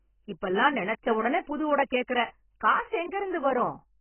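Speech runs through the whole clip with a hard ceiling at 3.1 kHz, so it sounds dull and muffled, and sibilants and held vowels carry a warbling, fizzy smear. The likely cause is heavy AAC compression: the encoder discards everything above the cut-off and coarsely quantises the rest, which fits a bitrate around 12 kbps. A spectrogram would show energy stopping abruptly at 3.1 kHz, with patchy holes and blocky smearing below.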